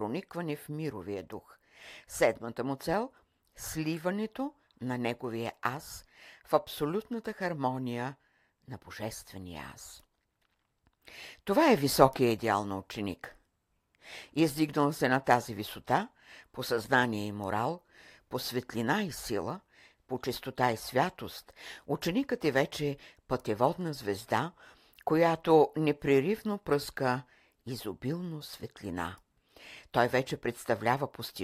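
From 0.44 s to 31.29 s the speech carries clock slip clicks: faint, regular ticks about every third of a second, roughly a hundred in all. The likely cause is two unsynchronised clocks differing by around 70 ppm, each slip dropping or repeating a single sample.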